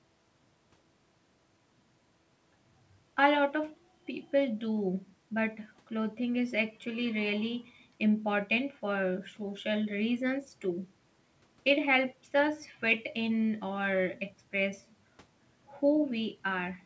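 No technical faults are audible in the speech, which carries the 8 kHz bandwidth ceiling and coding texture expected of a wideband call path such as G.722, with the usual low-bass trimming from call microphone processing.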